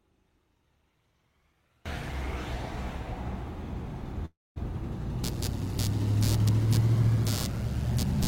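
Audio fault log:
0.00–1.86 s, one channel inverted: the mono sum drops by about 33 dB, likely from one reversed-polarity channel cancelling shared content, leaving a faint residue in the spectrogram.
4.25–4.58 s, call audio freeze: a fading buzz or hiss, then about 220 ms of flat silence, likely from an emptied jitter buffer; the sound resumes 305 ms late, nothing missing.
5.24–8.27 s, computer activity noise: a buzz of roughly 100 pulses per second, shown as evenly spaced vertical striations about 15 dB below the sound, following computer load.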